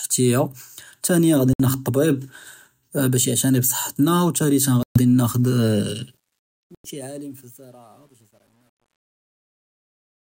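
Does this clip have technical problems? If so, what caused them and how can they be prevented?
Yes. There are three short dropouts to silence: at 1.53 to 1.60 s, right after "תאניא רא", then at 4.83 to 5.00 s and at 6.75 to 6.89 s. The gaps are about 63, 126 and 96 ms, and playback resumes afterwards. That pattern points to a likely Bluetooth stall: interference delayed packets, the headphone buffer ran empty, and the audio paused until the resent data arrived. To prevent it, keep the phone close with a clear line of sight and away from busy 2.4 GHz gear.

The fade-out that starts around 6 s and ends at 10.38 s also shows truncation distortion on a fade from 6.04 s. As the level drops, the waveform gets coarse, and from 7.13 s to the end it turns gritty. The fade stage seems to keep only about 9 bits, with no dither, so the quietest part falls onto a few crude steps. To prevent it, run the fade at full resolution and add dither whenever you reduce bit depth.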